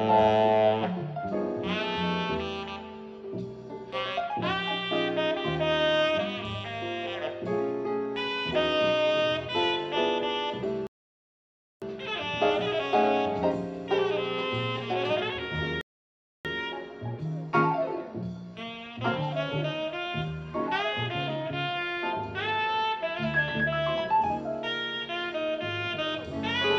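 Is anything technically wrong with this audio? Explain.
Yes, there are two rebuffering stalls. The first runs from 10.87 to 11.82 s and the second from 15.81 to 16.45 s. The player ran dry on downloaded audio and simply paused until more data turned up. You hear the sound drop to dead silence and then pick up exactly where it left off. Nothing gets skipped, but the stalls stretch the timeline by about 0.95 s and 0.64 s.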